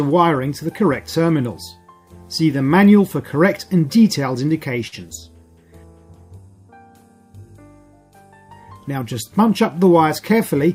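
The audio has two jitter-buffer problems, both about timing rather than lost content. Around 4.87 to 4.95 s there's a short stall from a late packet: a packet didn't show up on time, the buffer ran dry, and the receiver stretched the last bit of sound by 47 ms to cover the gap. It then picked up exactly where it left off, so nothing goes missing, but the sound at that point is held a touch too long and everything after it sits 47 ms later. Near the end, from 10.20 to 10.70 s, there's a jitter buffer speed-up. The buffer had built up more audio than it wanted, so the receiver trimmed out short pitch-period-sized slices again and again to catch up, dropping about 50 ms in total. The audio runs at 108% speed with the pitch unchanged, enough to sound hurried.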